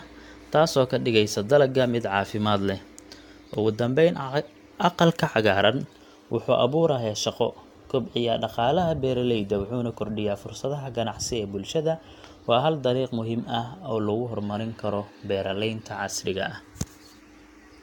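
Across the whole of this speech recording the sound has a swirly, hollow, smeared quality, with consonant attacks blurred, and nothing is present above about 17.6 kHz. This is generation loss, most likely from re-encoding several times over, perhaps around five passes, with a lossy codec such as AAC-LC at a rate in the region of 96 kbit/s. Each pass adds fresh quantisation noise and spectral gaps on a shifted frame grid.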